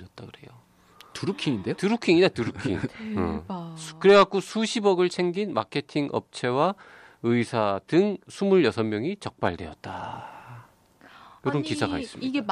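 Nothing in the speech here stands out as a technical fault, so there's nothing to point to at any moment in the recording.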